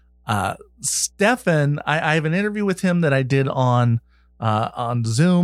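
Mains hum runs throughout: a ground loop or nearby transformer couples the 60 Hz power line in, a steady low tone roughly 35 dB below the signal.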